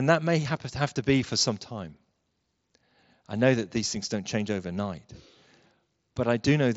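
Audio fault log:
No faults heard in this speech clip.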